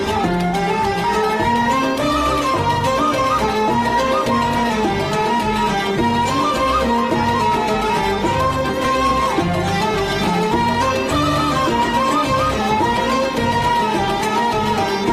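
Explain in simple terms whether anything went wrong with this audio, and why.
Nothing went wrong here: the signal stays steady and intact all the way, with no breaks, jumps or sudden changes anywhere in the recording.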